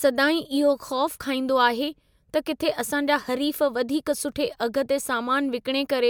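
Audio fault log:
No faults are audible anywhere in this speech recording. Nothing in it calls for an entry in the log.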